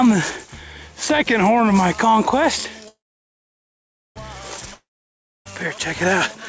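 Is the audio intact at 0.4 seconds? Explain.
Yes, the audio is intact at 0.4 seconds, with no dropout, glitch or other fault there.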